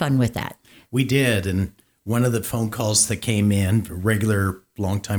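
No technical faults can be heard in this speech recording.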